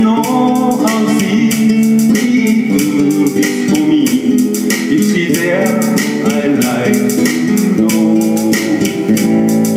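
Throughout the clip there is a pumping of roughly 5 dB that leaves loud and soft parts squashed together. This is gain pumping, likely from input gain set far too high and a fast limiter clamping down on each peak.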